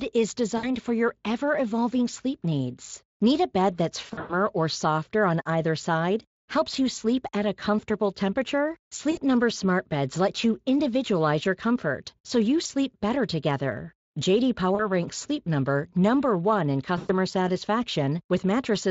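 VoIP packet loss concealed by the speech codec occurs at 0.57, 4.05, 9.11, 12.63, 14.75 and 16.97 s, losing 20 to 180 ms each. The Speex decoder fills gaps with fading, buzzy or noise-like extrapolated sound rather than silence, leaving the speech weakened briefly after, unlike clean dropouts.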